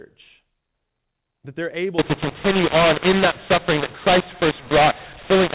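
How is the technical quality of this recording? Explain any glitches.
The first couple of seconds come through as ordinary narrowband telephone speech, capped at 4 kHz. Then, from about 1.99 s to the very end at 5.54 s, it falls apart with a mu-law and A-law mix-up. The audio was coded as A-law but decoded as mu-law, so every 8-bit code gets mapped onto the wrong logarithmic curve. Some levels come out too loud and others too quiet, and the near-silent samples jump well above zero. You hear harsh, gritty distortion on the speech, and the gaps between phrases fill with hiss instead of going quiet.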